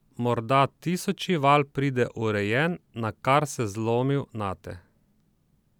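No technical faults are audible.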